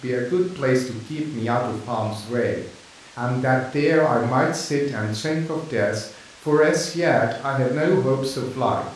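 A speech recording with no technical faults to point to. Nothing in the signal path stands out as needing attention.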